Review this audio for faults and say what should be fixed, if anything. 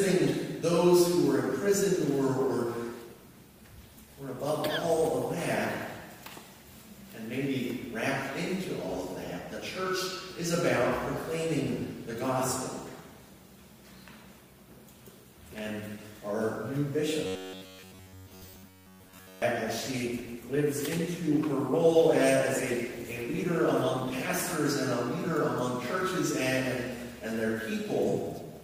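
Call bitrate drop, 3.02 to 6.57 s and 19.79 to 24.61 s. Both times the call's bandwidth estimate fell and the encoder was told to spend far fewer bits: from 64 to 23 kbps in the first event, at the lowest rate for about 2.5 s, and from 64 to 20 kbps in the second, at the lowest for about 4.8 s. With so few bits the codec quantises more coarsely, so the sound turns rough and loses detail, then clears as the rate returns. To prevent it, improve network headroom or set a higher minimum bitrate so the estimator cannot starve the encoder.

Robotic sound from repeated short buffers, 17.27 to 19.42 s. The sound takes on a rigid, metallic buzz at 93.8 Hz that only loosely follows the original. This is likely caused by new audio arriving too seldom, with playback filling the gaps by looping the last chunk of about 10.7 ms, which fits a buffer of that length. The loops covered most of this stretch while the real audio was skipped. 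To prevent it, use a larger, adaptive jitter buffer and proper packet-loss concealment instead of raw repetition.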